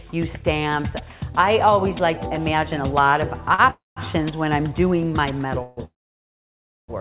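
Sound carried over a call link whose band stops at 4 kHz, which fits narrowband G.711 A-law at 64 kbps, is interrupted by several holds and gaps. At 3.54 s a sound is held for about 43 ms with a faint buzz or dip before continuing from the same point. This is a short stall from a late packet: the jitter buffer ran dry for a moment, and the receiver stretched the last sound until the packet arrived, so nothing is lost. Three longer call audio freezes follow. From 3.70 to 3.98 s the last sound smears into a fading buzz or hiss and then about 180 ms of silence. From 5.62 to 5.79 s there is a 145 ms hold of buzz or hiss with no silence. From 5.85 to 6.90 s a brief buzz or hiss gives way to nearly a second of silence. Each time the audio resumes where it stopped, so gaps are added but nothing is skipped. The likely cause is packets held up in transit, which emptied the jitter buffer while the receiver filled the wait with decaying concealment.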